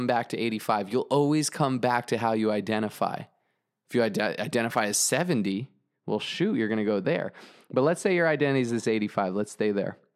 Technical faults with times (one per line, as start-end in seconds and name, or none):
5.52-10.16 de-emphasis applied wrongly